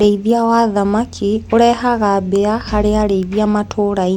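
Nothing in the recording trips up the ear, with no dropouts, clicks, glitches or distortion turning up anywhere along the way.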